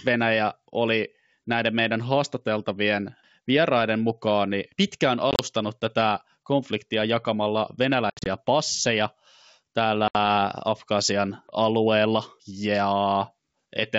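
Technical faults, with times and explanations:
5.31–5.40 s, 8.10–8.27 s and 10.08–10.16 s, packet loss on an ADPCM call: silent holes totalling 60, 120 and 70 ms, with the first two broken into runs of up to 30 and 70 ms. Afterwards the G.722 decoder's predictor and step size lag the sender, leaving slightly distorted speech that settles within some tens of milliseconds. On a spectrogram these show as hard-edged blank columns.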